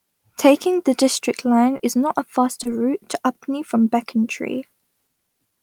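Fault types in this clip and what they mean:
Short concealed packet loss: brief smears at 1.77 s and 2.63 s, each about 20 ms, where the audio wobbles momentarily. A short stretch of the call arrived too late to decode, and the receiver bridged each gap by extending the preceding speech before blending back into the real signal.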